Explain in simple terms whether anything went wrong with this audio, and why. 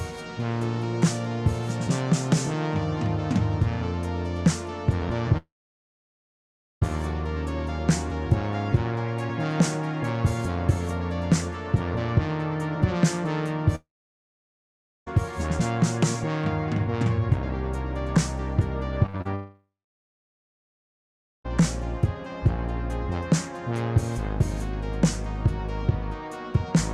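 The sound cuts out three times: 5.37 to 6.83 s, 13.75 to 15.08 s and 19.35 to 21.46 s. Each time a brief fading buzz leads into silence lasting over a second. This is a long network dropout, likely lost data, and that sound never returns.

Just before the last cut, from 19.06 to 19.27 s, the sound turns choppy and robotic. Four short holes, the longest 41 ms, are patched by stretching the previous sound. About half that stretch is patched. This is repeated packet loss.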